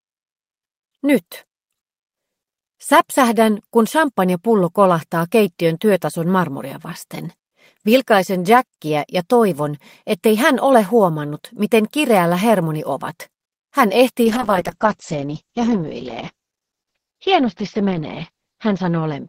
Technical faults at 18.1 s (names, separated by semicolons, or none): call bitrate drop